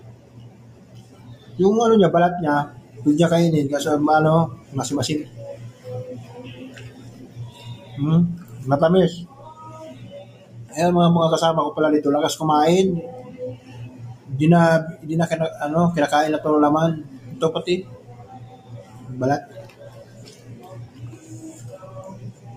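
A speech-style noise suppressor has been left running on this audio, and you can hear it the whole way through: it treats sustained material and ambience as noise, so levels swing by roughly 15 dB and the sound pumps and thins whenever it holds rather than hits. The sound gets cut by the noise suppressor hardest at 0–1.55 s (about 9 dB down), then about 8 dB at 2.7–2.97, 4.56–6.33, 6.9–8.54, 9.27–10.72, 13.57–14.29, 17.04–17.28, and from 17.84 s to the end, where held parts sink and tails get chopped.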